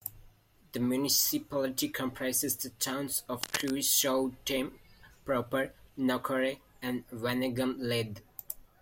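A short speech recording is marked by a burst of cable scratch noise from 3.41 to 3.70 s: for under a third of a second, a dense, uneven crackle and rustle sits over the speech, loud enough to rival it, only slightly below the level of the voice. The likely cause is a worn cable, connector or control being moved, so its contact resistance jumps around rapidly and injects these ragged noise bursts into the signal.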